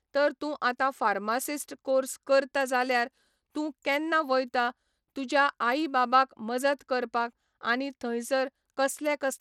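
From start to finish the speech carries plainly audible codec damage, most likely Bluetooth SBC compression. The treble flickers in and out as the top sub-bands lose their bits, and a gritty, aliased noise rides on the voice, consistent with a small bit pool at around 96 kbps. Content reaches up to about 20.8 kHz. Unlike a perceptual codec such as AAC or MP3, which produces swirly, watery artefacts, SBC has no hearing model, so its damage is coarse and broadband rather than smeared.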